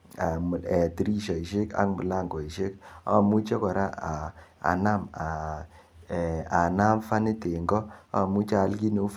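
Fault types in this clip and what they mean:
No technical faults are audible in this speech.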